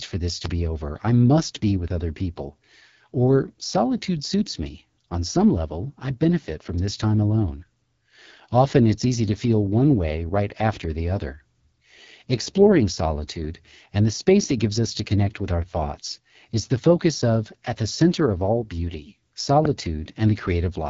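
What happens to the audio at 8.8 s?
At 8.8 s the speech carries the same AMR wideband (HD Voice) codec damage heard across the whole clip. The codec models the voice as pulses driving a vocal tract filter up to 6.4 kHz and fills the band above that with shaped noise, and nothing remains above 7.4 kHz. The speech sounds plainly rough and raspy, which fits one of AMR-WB's lowest modes, around 8.85 kbit/s.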